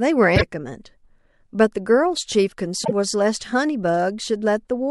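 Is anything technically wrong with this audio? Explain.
Yes. Damaged data in a compressed stream corrupts this speech at 0.33 to 0.42 s and 2.81 to 2.92 s. The decoder misreads frames and resynchronises, producing a brief chirp, squawk, click or short hole at each point.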